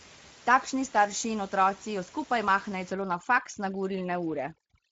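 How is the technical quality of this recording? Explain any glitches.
The recording has two faults: Speex codec damage across the whole clip and overdone noise removal in the last two seconds.

Speex codec damage runs from start to end and is plainly audible. The artefacts fit a Speex stream at roughly 16.8 kbps. At that rate, the CELP coder has too few bits to model the excitation accurately. The speech comes out hoarse and grainy, and any upper-band content is only a shaped noise wash rather than real detail.

Overdone noise removal starts at 2.92 s, right after "otroci jo skupaj mahnejo," and lasts to the end. The room noise, which sits about 22 dB below the speech, is attacked too aggressively. Individual frequency bands near the noise estimate are gated out, and low-level speech components go with them. The background collapses to near silence with twinkling specks.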